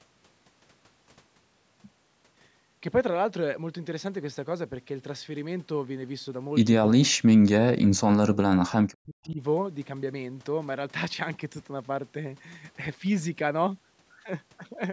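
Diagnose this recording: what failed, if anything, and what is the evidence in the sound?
The failure is in the call processing stage: speech suppressed in double talk. The speech gets pushed way down, sometimes to near silence, from 6.96 to 7.2 s, from 7.67 to 8.82 s and from 8.98 to 9.41 s. The likely cause is the echo canceller seeing both ends active, failing to tell this talker from loudspeaker echo, and clamping down on everything. Nothing in the audio goes above 8 kHz, which fits that same call microphone chain.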